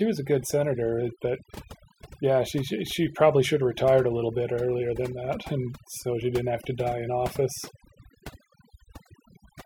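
Speech runs throughout with overdone noise removal: a noise reducer pushed too hard on a noisy recording has cut individual frequency bands near its noise estimate, taking quiet parts of the voice along. Pauses drop to near silence flecked with twinkling specks. A spectrogram shows dark gaps between isolated bright dots.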